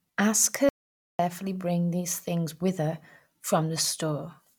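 The input feed to the recorder was most likely interrupted for a moment, by a loose connection, a dropped link or a brief mute, while writing carried on with silence, producing an audio dropout to silence in this speech clip. From 0.69 s to 1.19 s, roughly half a second, the speech cuts off abruptly and resumes mid-flow. The gap is silent with no room tone underneath, and whatever was said during it is lost.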